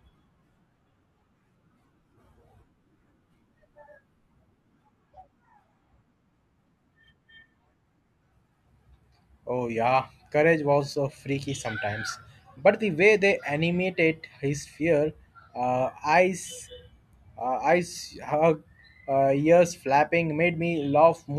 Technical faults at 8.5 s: none

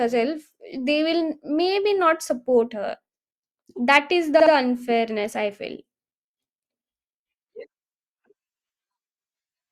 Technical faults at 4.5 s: repeated frames

